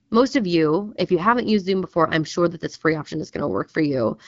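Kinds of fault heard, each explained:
No faults heard.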